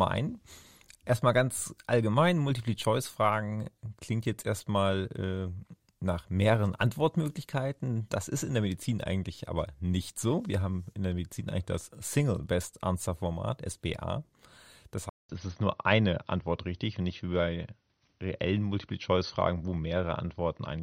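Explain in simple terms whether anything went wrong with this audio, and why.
At 15.09 s the sound cuts out for about 0.2 s, then returns duller, with nothing above 6.1 kHz and a faint new background noise, at roughly the same loudness, until the end. The likely cause is an input switched to a poorer device.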